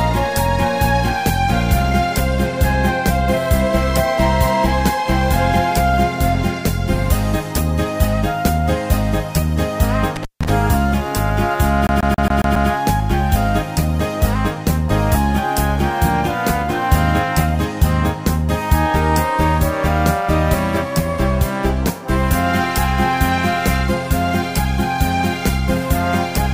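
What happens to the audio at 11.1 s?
Nothing goes wrong at 11.1 s; the audio plays through that moment intact, with no audible fault.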